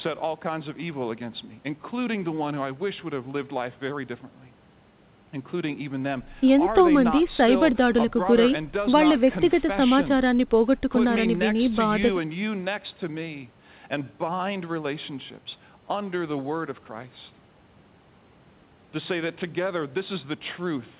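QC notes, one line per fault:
Nothing to flag on this speech clip; the band-limited sound of the G.711 mu-law call path, with nothing above 4 kHz, is just how the call codec normally sounds.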